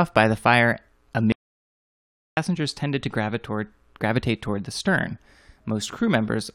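Just after "by the fire", at 1.32 s, an audio dropout to silence removes 1.05 s of speech until 2.37 s, leaving no room tone. The input was likely lost while recording continued. A waveform shows a flat line there; a spectrogram, a blank vertical band.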